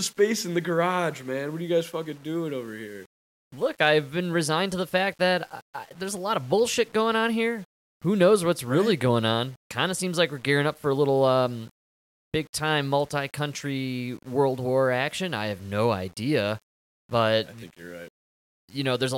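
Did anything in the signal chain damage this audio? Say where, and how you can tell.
No, the speech signal comes through intact, with no audible damage from any stage of the chain.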